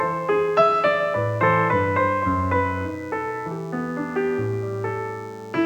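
From start to finish a thin, steady buzz sits under the sound: DECT cordless phone buzz. A nearby handset or base station pulses radio bursts 100 times a second, which the audio circuitry rectifies into a 100 Hz tone rich in harmonics, roughly 35 dB below the signal.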